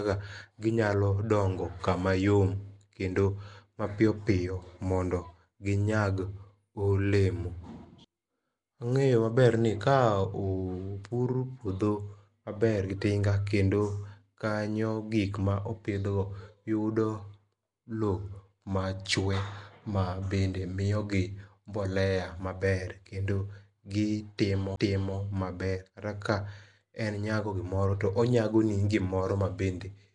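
From the start, the speech carries a rough, hissy halo and a smeared, underwater quality, with nothing above 10.6 kHz. This is plainly audible codec damage, most likely Nellymoser compression. That Flash-era codec spends a fixed two bits per sample on 256-sample blocks and fills starved bands with noise, which is what the audio's level of damage suggests, roughly 44 kbps. Unlike MP3 swirl, the grit here is noise-filled rather than warbly.

At 24.76 s there is a CD skip. Playback mutes for roughly 10 ms, leaving a tick or short gap, then carries on from a different point on the disc's spiral after the laser jumped. What sets it apart from a network dropout or a simple digital click is the jump itself. The sound does not pick up where it stopped but resumes displaced in time, so a small piece of the speech is lost or repeated.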